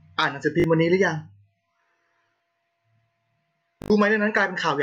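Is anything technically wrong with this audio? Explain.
Yes, there's a repeated buffer at 0.60, 2.36 and 3.82 s. Fresh audio arrived late, so a 20 ms chunk replayed two, two, then four extra times, giving brief buzzy stutters in the speech.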